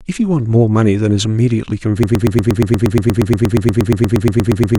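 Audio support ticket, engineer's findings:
Broken-record loop from 2.03 s to end of speech clip. Same 0.12 s fragment replays back to back, 23 times, replacing the audio that should follow. Probable component: player, decoder or stream buffer, likely stalled and re-sending its last held fragment. Waveform: identical short block tiled at fixed spacing. Spectrogram: one spectral slice stamped repeatedly, vertical seams every 0.12 s, no onward progression.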